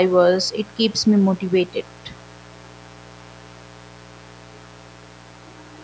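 Throughout the speech, a steady, raspy mains buzz sits well below the voice: switching spikes at twice 60 Hz, with harmonics reaching into the kilohertz range of the call-band audio.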